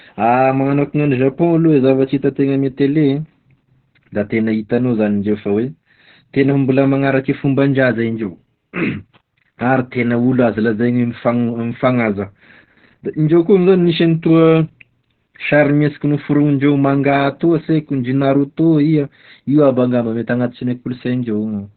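Opus voice compression runs through the whole clip. Nothing is left above 4.5 kHz, so the speech is narrowband. The coder's linear-prediction mode rebuilds it from a coarse excitation. The damage is heavy: muffled, hoarse and slightly robotic. That fits a rate near 8 kbps.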